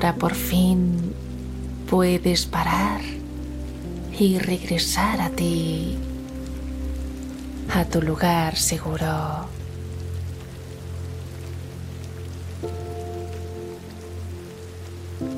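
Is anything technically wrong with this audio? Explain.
No, no technical faults heard.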